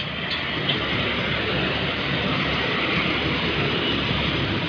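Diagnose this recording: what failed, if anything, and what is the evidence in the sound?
Nothing failed; no faults heard.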